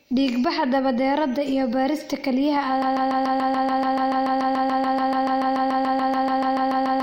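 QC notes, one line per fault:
2.82 s to end, broken-record loop: a 144 ms fragment of the speech repeats back to back, exactly alike, about 29 times until the clip ends, likely because the player or stream stalled and kept resending its last buffer. Everything that should have followed is lost.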